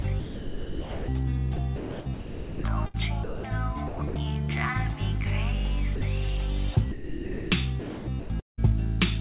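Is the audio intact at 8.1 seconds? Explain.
No, 8.1 s falls inside a choppy stretch from 7.80 to 8.60 s, likely sound chopped by the voice detector. The sender kept toggling transmission, so about 0.56 s of real audio got swapped for comfort noise.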